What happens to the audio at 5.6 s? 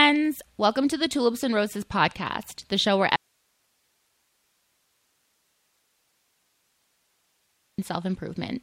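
At 5.6 s the speech is gone and only a faint hiss remains, sitting about 45 dB below the normal level. The sound cuts off abruptly right after "podcast the show where" at 3.16 s and stays out until 7.78 s, a gap of about 4.6 s. This is an audio dropout to a faint residue: the wanted signal was likely lost upstream while the path after the break stayed live, passing only its own noise.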